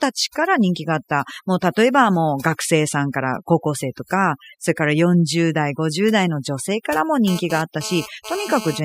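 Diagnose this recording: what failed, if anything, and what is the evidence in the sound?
Overdone noise removal runs through the whole clip, at the call-processing stage. The background drops and breaks up into twinkling specks. Individual frequency bands near the noise estimate were pushed far down, so the spectrogram shows isolated musical-noise dots and ragged speech edges.

A GSM phone buzz enters the analogue wiring from 7.28 to 8.80 s, right after "性からも". It is a hard raspy buzz at 217 Hz, about 12 dB below the speech, that comes and goes as in a data transfer. The spectrogram shows a harmonic comb, and the waveform shows gated pulse trains.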